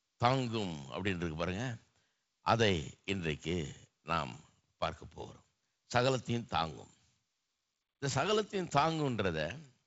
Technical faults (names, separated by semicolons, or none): none